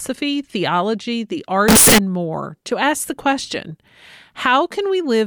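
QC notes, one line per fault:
1.68–1.98 s, float read as integer: for about 0.3 s the speech turns into a near-square, very loud and harsh blast sitting at an almost fixed, high level, with background noise raised to the same level as the speech, though the pitch contour can still be followed. This is likely 32-bit float samples being read as 32-bit integers, so sign and exponent bits set each value. Unlike clipping or overdrive, the level jumps regardless of how quiet the source was.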